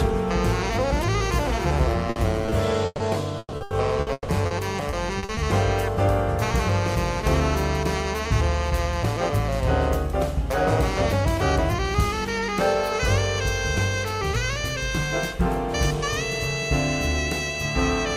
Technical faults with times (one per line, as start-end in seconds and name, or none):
2.10-3.11 repeated packet loss (robotic sound)
3.39-4.53 repeated packet loss (robotic sound)
4.91-5.39 repeated packet loss (robotic sound)